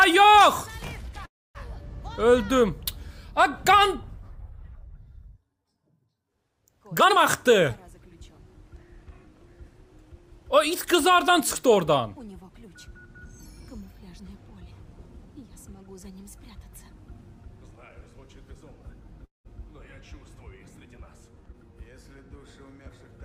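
At 1.25 s and again at 19.25 s there's a call audio freeze: the sound stalls into a fading buzz, then near-silence, for about 0.3 s and 0.2 s. That's likely packets arriving late and the jitter buffer running dry. Nothing is lost; the audio just resumes late. From 7.0 to 14.2 s a jitter buffer speed-up trims tiny pitch-period slices, running about 4% fast and dropping roughly a third of a second. A sharper burst at 21.46 s nearly doubles the speed for a moment.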